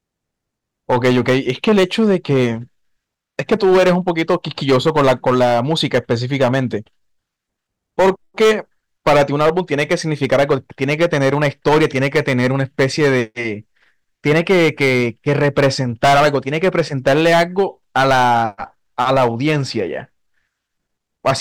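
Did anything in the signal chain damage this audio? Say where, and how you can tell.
Yes. The speech was driven about 14 dB past the ceiling of a converter or fixed-point stage, so the chain is hard clipping the whole clip. Every loud syllable has its peaks sliced flat, and roughly one sample in twenty sits pinned at that stage's limit. Those squared-off tops generate high harmonics that were never in the source. They sound like a harsh, buzzing fuzz riding on each stressed sound from start to finish rather than occasional crackles.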